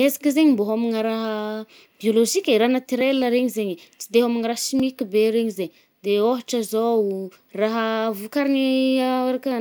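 Two sharp ticks cut into the speech at 3.01 s and 4.80 s. Each is a block of digital silence lasting under 2 ms (about 1.75 ms, then 1.9 ms), where the samples drop abruptly to silence and return with no fade. Those hard edges, rather than the gap itself, produce the ticks, since a hole this brief is too short to hear as a pause. Dropouts like these point to the output buffer not being filled in time.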